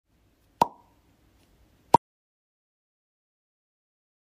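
At 1.96 s the sound cuts off mid-flow and never returns, leaving an audio dropout to silence for the last 2.35 s or so. There's no room tone in that gap, just dead air, which likely means the input was lost while recording carried on.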